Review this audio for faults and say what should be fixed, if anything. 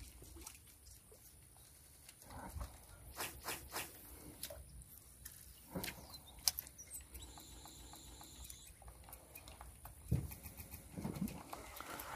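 Repeated frames cause stutters at 1.74–2.02 s, 3.32–3.88 s, 5.32–5.41 s, 7.50–8.34 s and 10.43–10.85 s. Each one replays a compressed block of 46 to 279 ms two or three extra times. Check the encoder's write path and the transport for duplicated frames.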